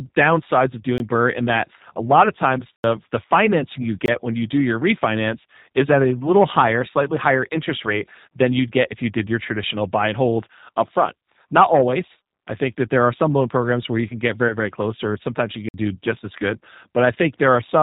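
The whole clip is G.729-coded speech at 8 kbit/s; the low-rate pulse model leaves a rough, synthetic tone, and the spectrogram shows nothing above 4 kHz.

Blocks of digital silence occur at 0.98–1.00 s after "downsides of", 2.76–2.84 s before "the financing you", 4.06–4.08 s, and 15.69–15.74 s before "do just as good". Each is a flat gap on the waveform with abrupt edges.

At 14.48–14.58 s, VoIP packet loss concealed by the speech codec, which fits one lost 20 ms packet, smears the sound into a fading buzzy tone or coloured noise that shows as blurred harmonics.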